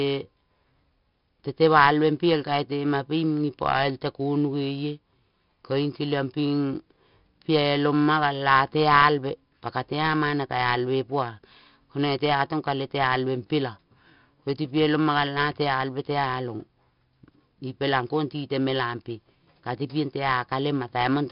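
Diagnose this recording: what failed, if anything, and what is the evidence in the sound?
Codec stage: 4-bit ADPCM compression throughout, which fits about 44 kbps. Coarse steps add gritty hiss that follows level, distort sharp attacks, and nothing passes above 5.4 kHz.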